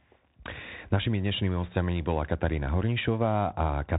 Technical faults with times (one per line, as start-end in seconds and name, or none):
0.00-3.99 Bluetooth CVSD headset codec